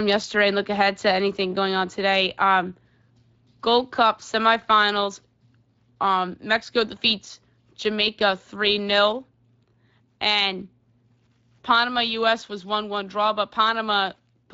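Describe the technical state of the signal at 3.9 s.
At 3.9 s the speech is carrying Speex codec damage, and that's the case across the whole clip, not just at that moment. Speex is a CELP coder, so it rebuilds the voice from a filter model plus a cheaply coded excitation. Here the damage is plainly audible, giving a grainy, somewhat hoarse, noisy edge to the speech, which points to a middling Speex setting of around 20 kbps that doesn't leave enough bits for a clean excitation.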